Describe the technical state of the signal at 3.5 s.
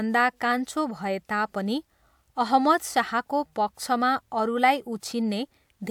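At 3.5 s the speech signal is intact, with no audible fault at that moment.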